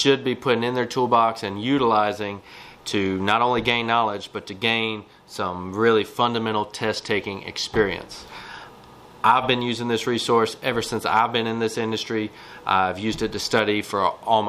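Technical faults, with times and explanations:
No technical faults detected.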